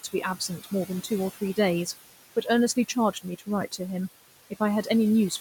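A noise suppressor runs across the whole recording, estimating what it treats as steady background and pulling those frequency bands down frame by frame, by about 17 dB. The room noise, sitting about 15 dB under the speech, is pushed away in the gaps and creeps back up beneath each phrase. These are classic noise suppressor artifacts.

From 3.13 to 3.48 s, the suppressor mistakes part of the speech itself for noise, producing speech cut by the noise suppressor. Its gain drops by as much as about 16 dB on speech energy, not just on background, so low-level detail is turned down along with the room sound. Around 150 ms of that span is affected in total. Soft consonants and quieter edges of syllables there sound swallowed.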